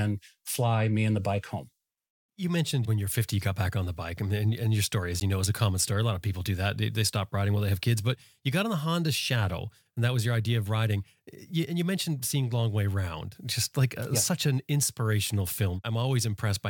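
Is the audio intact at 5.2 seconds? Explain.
No. A Bluetooth dropout at 5.20 s silences the speech for 13 ms, likely one late packet dropped before the headphones, and sound resumes as if it had played on.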